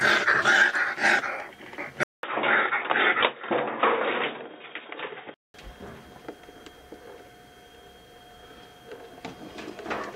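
From 2.03 s to 5.54 s the sound turns dull and boxy after a 200 ms silence, losing everything above 3.8 kHz, with a new noise floor roughly 45 dB down at unchanged level, likely from input switched to a poorer device.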